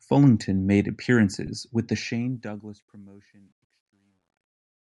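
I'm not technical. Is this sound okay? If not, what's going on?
No. There are three problems in this speech recording.

Throughout the clip the voice has a breathy, grainy edge, and the top end sounds thin and hissy rather than crisp. That is plainly audible Bluetooth LC3 compression, most likely from a Bluetooth LE Audio link. To save data, the codec discards much of the high-frequency detail and fills the gap with soft noise. That noise is the grain you hear on the voice.

At 1.47 s, right before "with the", there is a tiny blip where the sound smears for a moment. This comes from lost LE Audio frames. One 10 ms chunk of audio never arrived, and the receiver filled the gap by reusing the previous chunk with its detail scrambled. The gap is short, so it registers as a brief roughness rather than a dropout.

From 1.93 s to the end, after "with the", the sound becomes gritty as it gets quieter. 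This is truncation distortion on a fade. The volume-lowering step keeps too little precision, which fits about 11 bits, so the quietest parts of the waveform are forced into coarse steps. The effect is worst from 2.97 s to 4.83 s.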